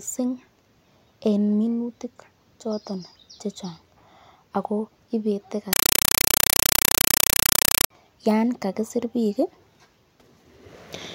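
From 5.73 to 7.90 s the speech gives way to very loud, harsh chattering static: short bursts of noise, each about 5.33 ms, repeating 31.25 times a second with silence between them. This is a compressed stream played as audio. A Dolby Digital (AC-3) bitstream, consistent with a 256 kbps stream, was passed along the digital link as if it were ordinary samples and never decoded. Each frame of data plays back as a noise burst followed by zero padding.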